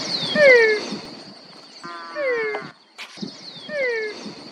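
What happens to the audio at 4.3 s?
At 4.3 s the audio is intact, with no fault and no fader-like level change at that point.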